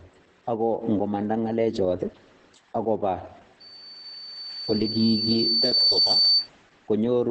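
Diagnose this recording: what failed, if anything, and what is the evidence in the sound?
Two stages failed: the codec, throughout, and an acoustic loop in the room, partway through.

Opus voice compression is the codec-stage fault, heard over the whole clip. The speech is muffled, hoarse and slightly robotic, with nothing above about 8 kHz. That fits the SILK coder running in wideband mode at a low rate, around 10 kbps. A simple low-pass filter or tired analogue wiring would only dull the sound. This clip also has a grainy, coarsely coded excitation, which shows the damage happened in a speech coder and not in the cabling.

A loudspeaker feedback squeal sits in the capture chain, where the microphone hears its own loudspeaker. It starts at 3.60 s as a single 4.6 kHz tone, grows on its own over roughly two seconds, and ends up a few decibels louder than the speech before it cuts off at 6.49 s. 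Mains hum or an electronic whine would stay at a steady level. This tone swells by itself, which shows a loop whose gain exceeds one at that frequency.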